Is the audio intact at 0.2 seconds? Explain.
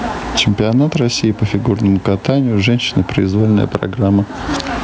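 No. At 0.2 s the speech is affected by gain pumping, which runs through the whole clip. The level is dragged down on each loud syllable and recovers in the gaps, with a swing of around 20 dB. The likely cause is input gain set far too high, with a fast limiter or compressor clamping every peak. The room noise sits about 42 dB below the speech, and the sound is squashed.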